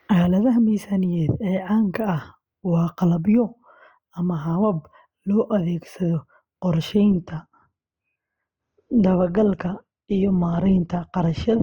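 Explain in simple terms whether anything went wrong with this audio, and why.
At 7.10 s the adaptive stream switches to a lower bitrate because the connection slowed: treble above 8.2 kHz vanishes and the speech turns dull and grainy through to the end.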